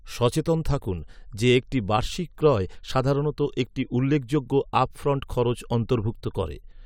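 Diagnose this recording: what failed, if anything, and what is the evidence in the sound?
Nothing in the speech stood out as a fault on listening, at any stage of the chain.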